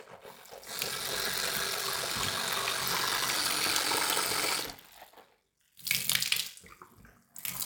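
From start to finish the sound carries a block size mismatch (padded). Each downstream block is topped up with zeros, leaving a brief gap per cycle. This gives a steady 46.9 Hz buzz, consistent with 1024-sample reads, and playback slowed to 0.861 speed at roughly unchanged pitch.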